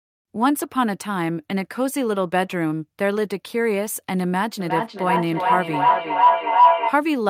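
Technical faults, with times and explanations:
4.6 to 7.02 s, feedback howl: a steady tone around 1 kHz rises out of the speech, pulsing roughly every 0.4 s and peaking about 7 dB louder than the speech before it stops. Sound from a loudspeaker is reaching a microphone on the same call and being sent back out with more gain on each trip. Each pass narrows the sound to the frequency that the loop favours, and the pulsing follows the loop's round-trip delay.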